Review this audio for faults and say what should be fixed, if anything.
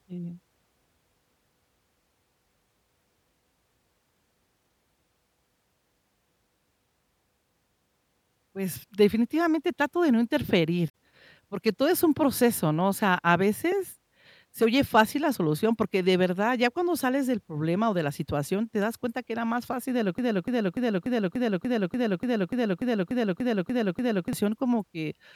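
At 10.88 to 10.93 s there is a brief glitch from damaged data in the compressed stream. The decoder lost sync.

From 20.18 to 24.33 s a 0.29 s fragment repeats 14 times as a broken-record loop. The likely cause is a stalled player or stream resending its last buffer, so the speech in that span is lost.

Prevent both by checking stream integrity in transit and restarting stalled playback instead of replaying held audio.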